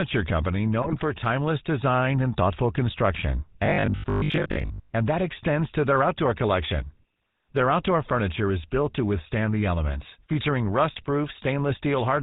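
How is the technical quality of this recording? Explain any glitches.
The recording is heavily degraded: the whole clip carries plainly audible GSM full-rate codec damage, and three shorter glitches break through on top of it.

GSM full-rate codec, throughout: The speech has the buzzy, gravelly roughness of the original 2G mobile codec, and the sound fits its 13 kbps rate. The codec rebuilds the voice from a vocal-tract model fed by sparse, regularly spaced pulses, which produces the grit. On a spectrogram, energy stops at a hard ceiling at 4 kHz, and the harmonics look smeared and grainy instead of cleanly striated.

GSM bit errors, 0.82 to 1.03 s and 10.94 to 11.04 s: The first burst comes just before "timeless design and thoughtful". The second comes just after "withstand the elements featuring". Corrupted bits reached the decoder and scrambled its filter, pitch and gain parameters for individual frames. 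The result is squawks, pops and a gargling break. The waveform shows abrupt level spikes. The spectrogram shows blocky, frame-sized patches with misplaced or overblown energy.

Robotic sound from repeated short buffers, 3.66 to 4.92 s: This runs between "design and thoughtful construction" and "and that extends to". The voice turns into a rigid metallic drone at 50 Hz, with most of the stretch made of repeats. The likely cause is audio arriving too slowly, so the playback looped the last fragment, which fits a 20 ms buffer. A spectrogram shows evenly spaced vertical striations every 20 ms. The waveform shows near-identical repeating cycles.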